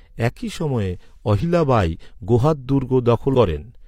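Compressed frames skipped: about two 46.4 ms frames are lost at 1.40–1.44 s, after "একই সময়ে" and before "বাই গোহাদ", and again at 3.30–3.35 s. Each time the speech jumps ahead by roughly a tenth of a second.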